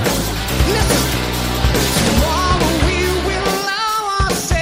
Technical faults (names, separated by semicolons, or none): none